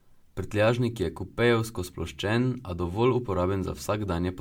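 Generation loss runs throughout the speech, from start to finish. The sound is swirly and hollow, with smeared consonant attacks and a watery shimmer that seems worse than a roughly 100 kbit/s MP3 should produce, even though the spectrum still reaches up to 20 kHz. The likely cause is repeated lossy coding, about five MP3 passes in a row, each re-quantising on a shifted frame grid so that noise and spectral gaps build up.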